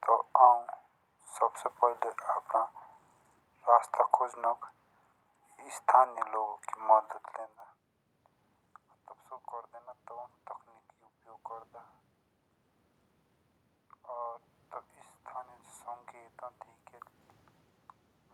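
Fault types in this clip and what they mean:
Bit error spike: two isolated, broadband ticks at 7.60 s and 17.30 s, caused by a flipped bit momentarily throwing a sample value by a power of two.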